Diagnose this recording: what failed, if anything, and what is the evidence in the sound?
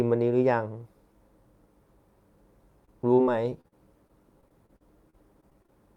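The network stage failed, with repeated packet loss (robotic sound) from 2.85 s to 5.7 s. About sixteen short holes interrupt the speech, the longest near 39 ms. Each is patched by extending the previous sound, covering about 12% of that stretch. This makes it choppy, with pieces missing.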